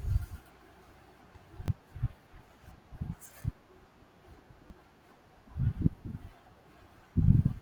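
At 1.66 to 1.68 s, 3.42 to 3.44 s, and 4.68 to 4.70 s, the speech stutters briefly. Each is a repeated buffer. Fresh audio reached the output late, so the last block played a second time. The same tiny slice sounds twice, with a hard join between the copies. Each repeat lasts about 20 ms, which fits a 20 ms buffer. It is heard as a quick click or buzz, and roughly 20 ms of speech is skipped each time.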